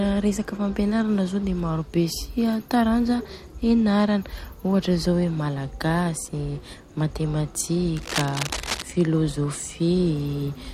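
A speech recording with one fault: cable scratch noise from 7.96 to 8.83 s. For just under a second, a rough, uneven scratching and rustling sits over the speech. It is loud, nearly as strong as the speech itself. The bursts are dense and irregular, not steady like hiss. The likely cause is a worn cable, connector or control being moved. Its contact resistance jumps about quickly, and the signal picks up noise with each change.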